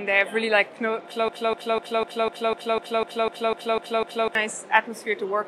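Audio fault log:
1.28–4.35 s: broken-record loop. A piece of sound about 250 ms long repeats exactly, back to back, 12 times. The likely cause is a stalled player or stream resending its last fragment. The audio that belonged in that span is lost.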